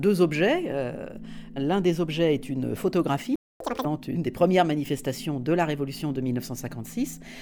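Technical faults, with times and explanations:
3.36–3.60 s, playback stall. The sound stops mid-flow for 247 ms, then carries on. The player likely ran out of buffered data or had its thread blocked. Output stayed silent until it recovered, which is why the gap is so abrupt.
3.60–3.85 s, catch-up at higher speed. Right after the gap, the sound runs at twice normal speed for about a quarter second. Pitch rises by around ten semitones. The player is resampling its backlog to win back lost time, then drops to normal rate.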